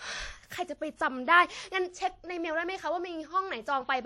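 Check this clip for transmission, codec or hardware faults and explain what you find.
One codec fault is present, running through the whole speech clip: audible WMA compression damage. From start to finish the speech carries a ringing, washy smear and a hiss that swells and fades with the level of the voice. The likely cause is a Windows Media Audio transform encoder using long blocks at a low rate, consistent with roughly 48 kbps. Quantisation noise is spread across tens of milliseconds around each sound rather than confined to it, and weaker spectral components are discarded entirely, leaving the thin, swirling texture and signal-dependent hiss.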